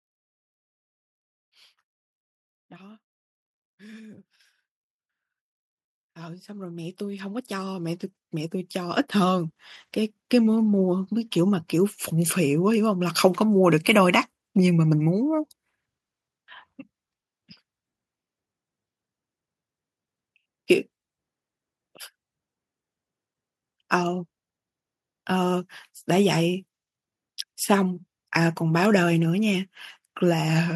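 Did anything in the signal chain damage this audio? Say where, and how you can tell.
Yes: automatic gain rising in the call processing stage, from 6.15 to 9.61 s. Voice and background noise swell together by about 14 dB over roughly three and a half seconds, as the AGC lifts its gain on a too-quiet input. The waveform envelope, noise floor included, ramps up steadily.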